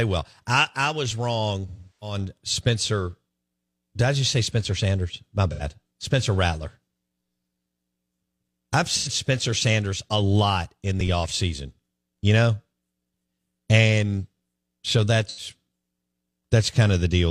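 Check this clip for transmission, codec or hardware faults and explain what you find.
The speech carries AAC frame loss with concealment at four points: 1.68 to 2.17 s, then briefly at 5.51 to 5.63 s, 8.97 to 9.08 s and 15.27 to 15.48 s. The decoder lost frames and filled each gap by re-using the last good spectrum with scrambled signs or interpolated energy. The result is a smeared, noisy, phasey patch rather than a hard silent dropout or click. The first gap spans several consecutive frames, which fits about eight lost frames. The later three are shorter, consistent with two frames each.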